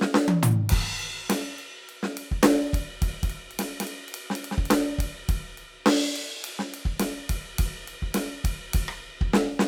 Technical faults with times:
3.08-4.78 doubled audio track

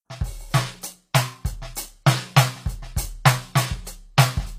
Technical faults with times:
0.00-4.59 HE-AAC compression

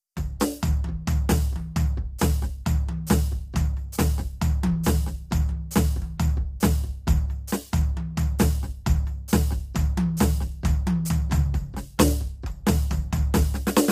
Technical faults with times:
0.00-13.92 low-delay AAC compression

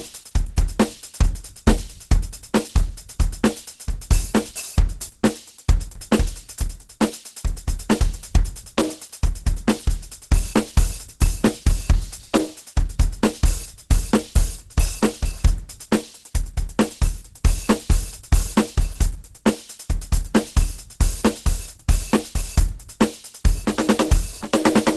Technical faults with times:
0.00-24.96 Opus compression

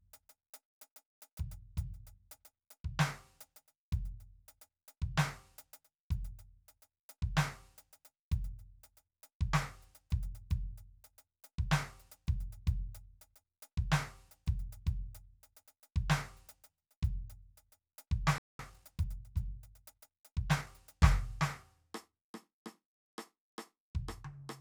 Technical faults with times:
18.38-18.59 playback stall
18.59-20.67 time-compressed catch-up

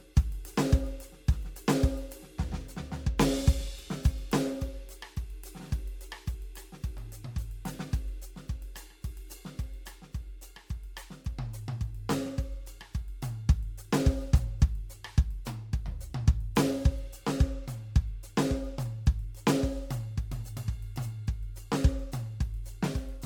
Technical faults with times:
0.00-23.25 generation loss

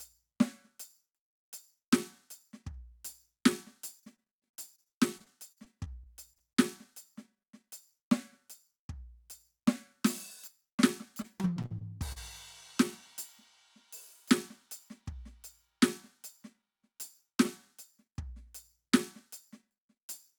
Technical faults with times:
3.99-6.60 repeated packet loss (robotic sound)
11.22-12.18 repeated packet loss (robotic sound)

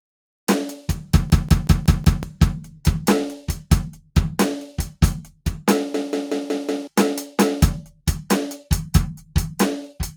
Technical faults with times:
1.30-2.23 system hang loop
5.94-6.87 system hang loop
7.89-8.07 sound cut by the noise suppressor

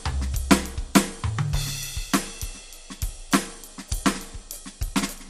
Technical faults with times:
0.00-5.29 MP2 compression

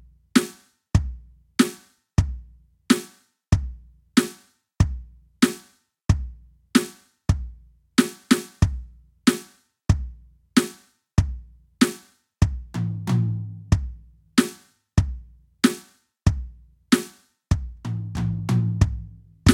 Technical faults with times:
none

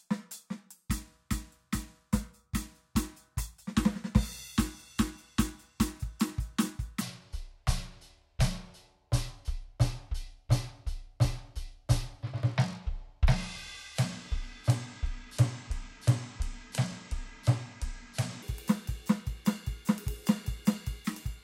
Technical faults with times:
7.01-18.42 section at the wrong speed

